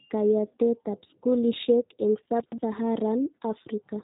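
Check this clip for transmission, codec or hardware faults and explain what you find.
Two faults are present: a low-bitrate speech codec across the whole clip, and one brief jumbled moment.

G.729 codec, throughout. Speech sounds rough and synthetic, with nothing above 3.8 kHz. The encoder rebuilds speech from a simple model, which fits 8 kbit/s G.729A.

Chunks out of order, 2.4 to 2.58 s, just after "kayatetab skulishek eng". A 60 ms chunk plays two chunks late. The sound jumbles briefly.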